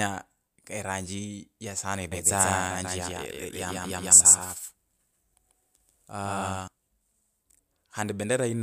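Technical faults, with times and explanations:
2.12–6.68 s doubled audio track: an equally loud copy lags about 150 ms, likely from a slower capture path; unlike echo, it never decays and has abrupt edges.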